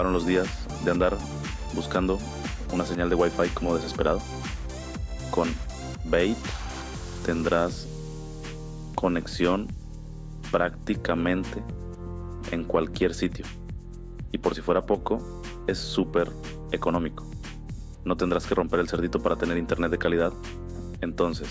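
No technical faults can be heard anywhere in the clip. Nothing in the audio points to a problem in the chain that carried it.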